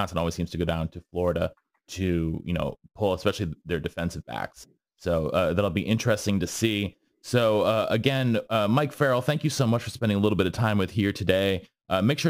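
Throughout the clip, sample clock jitter is present: the converter's clock wanders by several microseconds, so each sample lands slightly off its proper instant. Steep, loud and bright passages of speech pick up a gritty hiss roughly 30 dB down, which disappears in the pauses.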